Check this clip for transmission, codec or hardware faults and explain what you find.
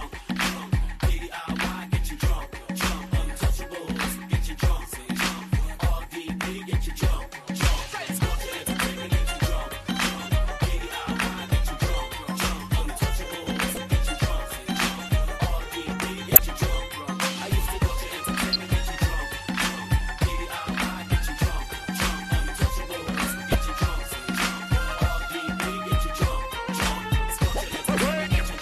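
There are four corrupt frames decoded: 13.69–13.78 s, 16.31–16.39 s, 18.53–18.65 s and 23.52–23.55 s. Damaged compressed frames were decoded anyway, so misread gains and codes put energy at the wrong frequencies, giving short chirps and noise bursts lasting a few frames each. The one at 16.31 s is the strongest of the four.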